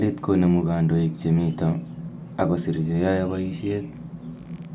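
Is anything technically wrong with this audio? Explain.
No, the speech signal comes through intact, with no technical faults to be heard anywhere in it.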